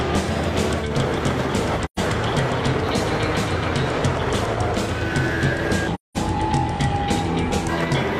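AAC frame loss with muting at 1.84–1.99 s and 5.94–6.17 s: zeroed frames leave soft-faded silent gaps, blank vertical bands on a spectrogram, tapered dips in the waveform.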